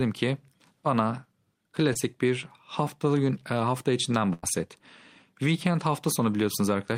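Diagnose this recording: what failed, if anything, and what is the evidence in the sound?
Short concealed packet loss at 1.93 to 1.97 s, a network fault: about 20 ms of the speech arrived too late to decode, and the receiver extended the preceding sound for roughly 17 ms before crossfading back, leaving a brief smear or wobble where that sliver went missing.

Burst of packet loss at 4.33 to 4.45 s, also on the network path: about 100 ms of consecutive audio never arrived in time. The decoder stretched the last sound for around 95 ms while fading it down, then the speech picks up again further on, skipping the lost stretch.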